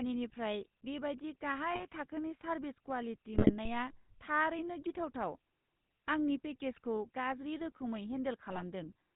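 GSM full-rate codec coding runs through the whole of this speech clip, and the damage is plainly audible. The codec rebuilds the voice from a vocal-tract filter excited by regularly spaced pulses, keeping only one excitation sample in three, so the voice takes on a buzzy, gravelly roughness and nothing survives above 4 kHz. The dull, band-limited sound fits the 13 kbps full-rate coder.

GSM bit errors break in at 1.72 to 1.85 s, 3.34 to 3.53 s, and 8.48 to 8.63 s, the last just after "आंनि पेकेजखौ गाज्रि रोखोमै". In each burst, flipped bits corrupt the decoder's filter, pitch and gain parameters for a handful of frames. That twists the spectrum and throws the level around, so the voice collapses briefly into squawks, pops and gargling. The middle burst is the longest and the most broken.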